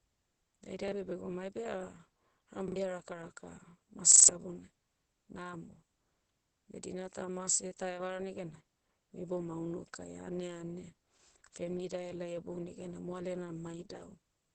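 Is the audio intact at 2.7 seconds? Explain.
No. From 2.68 to 2.76 s a short slice of the speech stutters, sounding three times in a row with a hard join at each restart, so it comes across as a short stutter. This is a repeated buffer: fresh audio didn't reach the output in time, so the device played its last chunk again, twice over. The repeat length fits a 40 ms buffer, and the jump afterward means something like 70 ms of the original speech never plays.

Underneath that stutter, and through the whole clip, the speech sounds muffled and hoarse, with nothing above about 8.8 kHz, so sibilants lose their sparkle. This is Opus compression, likely the codec falling back to its SILK speech mode at a low bitrate around 12 kbps. At that rate the encoder models the voice coarsely within a wideband limit, so the damage is heavy.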